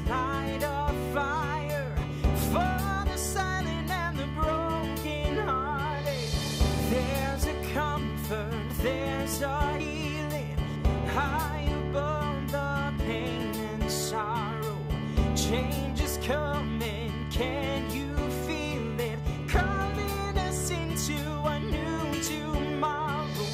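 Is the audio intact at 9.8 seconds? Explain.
No. At 9.8 s the sound jumps ahead abruptly. No gap of silence separates the two sides; they are joined directly. About a tenth of a second of audio is missing. This is likely a dropped buffer (overrun). The program did not read its samples before the hardware overwrote them. That block was lost, and playback continued from the next one.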